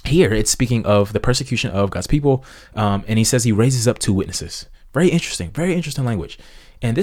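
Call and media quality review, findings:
No audible faults found in this speech recording.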